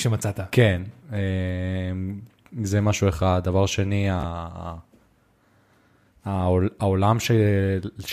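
Speech, with a brief Bluetooth stutter from 4.21 to 4.24 s. About 29 ms of audio went missing, which fits two lost packets, and the receiver replayed its last slice, giving a short buzzy repeat. A waveform shows identical repeated cycles there, and a spectrogram shows a tiled, frozen patch before speech resumes further on.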